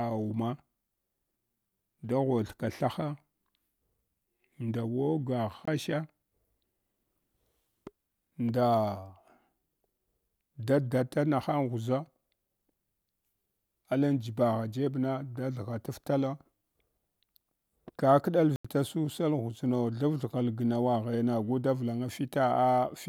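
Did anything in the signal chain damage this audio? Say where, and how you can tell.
Yes. Blocks of digital silence at 5.65–5.68 s and 18.56–18.65 s, lasting 21 ms and 85 ms, point to the driver or buffer stage. The output wasn't filled in time, so the sound drops straight to silence and back with no fade. The lengths fit 1024- and 4096-sample buffers.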